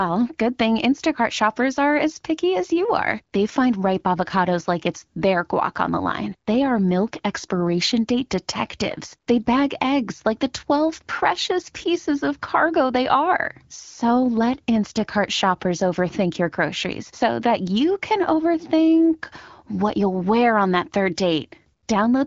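The speech carries no technical faults, and its band stops at about 7.1 kHz with the light coding of an AMR wideband (HD Voice) codec, which fits a rate near 15.85 kbit/s.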